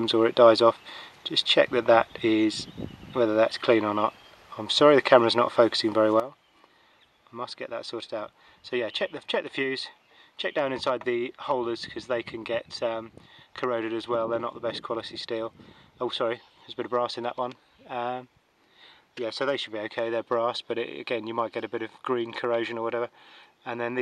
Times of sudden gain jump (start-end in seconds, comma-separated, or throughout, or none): 6.20-24.02